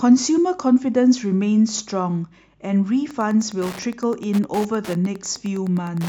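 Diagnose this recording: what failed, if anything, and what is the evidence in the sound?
The analogue wiring picked up Wi-Fi interference: a nearby radio's beacon, sent every 102.4 ms, is rectified inside the audio circuit. From 3.09 s to 6.09 s a steady ticking about ten times a second sits roughly 20 dB below the speech.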